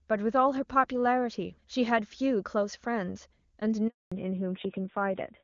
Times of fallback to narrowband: 4.12-5.44

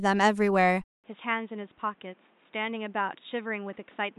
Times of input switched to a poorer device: 0.84-4.18

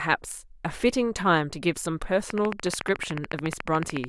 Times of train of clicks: 2.30-4.05

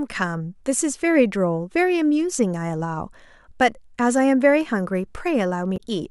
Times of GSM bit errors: none

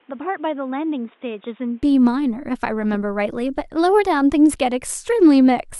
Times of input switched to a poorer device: 0.00-1.82

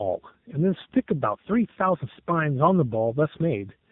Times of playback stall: none

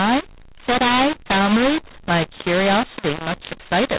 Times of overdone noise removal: none

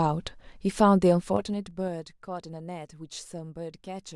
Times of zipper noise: 1.02-2.05

